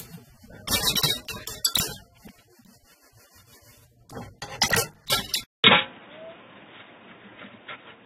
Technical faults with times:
0.00-8.05 transcoding between lossy codecs
5.44-8.05 input switched to a poorer device

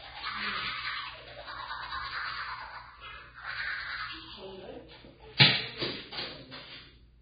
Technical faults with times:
0.00-7.21 Vorbis compression
5.37-5.40 pre-echo

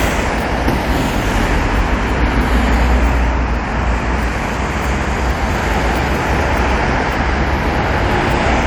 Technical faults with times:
none

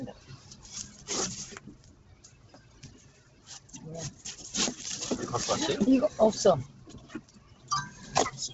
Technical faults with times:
0.00-8.54 noise suppressor applied to music or sounds
0.00-8.54 Bluetooth LC3 compression
0.13-1.08 sound cut by the noise suppressor
1.60-3.69 sound cut by the noise suppressor
6.68-7.70 sound cut by the noise suppressor

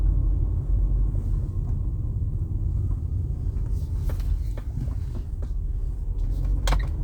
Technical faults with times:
none

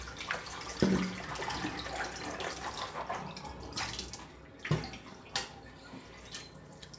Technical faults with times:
none

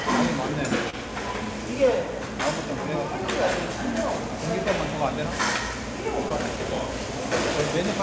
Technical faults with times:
0.90-0.95 short concealed packet loss
6.29-6.32 short concealed packet loss

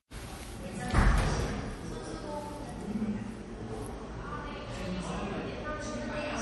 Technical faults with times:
0.00-6.41 MP3 compression

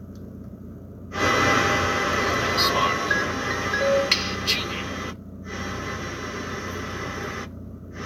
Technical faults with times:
none

